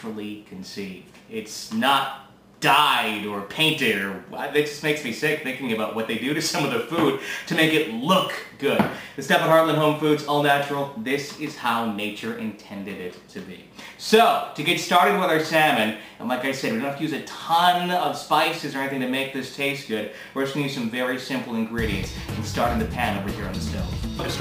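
From start to finish, a gritty, inharmonic fizz rides on the louder and brighter moments, roughly 20 dB under the sound. This is crude rate conversion, likely nearest-sample repetition with no filtering, which fits a change from 32 kHz to 44.1 kHz.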